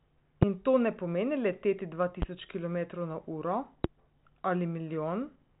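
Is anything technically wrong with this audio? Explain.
Yes. Three loud pops, at 0.43, 2.22 and 3.84 s, each lasting under 30 ms and peaking about 15 to 25 dB above the speech, which continues underneath. These sharp single pulses likely come from a voltage step, such as a plug, switch or static discharge, entering the signal path. The band-limited telephone sound, with nothing above 3.8 kHz and faint or no coding hiss, fits G.726 ADPCM at around 40 kbit/s.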